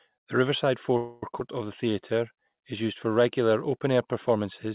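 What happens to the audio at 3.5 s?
Nothing goes wrong at 3.5 s: the speech continues intact through that moment, carried by the call path's telephone-band G.711 coding with nothing above 4 kHz.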